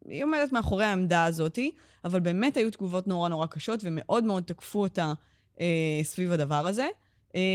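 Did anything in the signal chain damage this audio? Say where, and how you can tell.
No, nothing in the chain has damaged this speech: the Opus voice compression is working as intended in its hybrid mode with full bandwidth, keeping content up to about 20.2 kHz and leaving only the light coding texture expected at a rate around 20 kbps.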